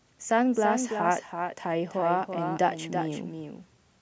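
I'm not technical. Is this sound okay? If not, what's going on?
No. All the way through this speech clip, every sound is heard twice. A second copy follows about a third of a second behind the first, a bit quieter but still clear. This is a doubled audio track. It doesn't fade like a real echo in a room. It is just the same sound played again, out of step. The likely cause is the audio being picked up a second time through a slower route and mixed back in.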